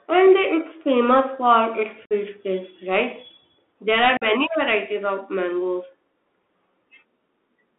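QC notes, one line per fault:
Throughout, Bluetooth CVSD headset codec: band limited to 250 Hz–3.5 kHz, with granular hiss and scratchy sibilants; the spectrogram shows a hard ceiling at 3.5 kHz.
2.06–2.13 s and 4.17–4.23 s, unconcealed Bluetooth headset packet loss: holes of 52.5 ms and 45 ms before "taste right" and "varieties of", cut abruptly in the waveform.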